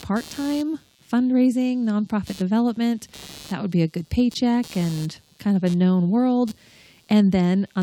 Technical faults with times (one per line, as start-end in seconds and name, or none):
0.00-7.83 computer activity noise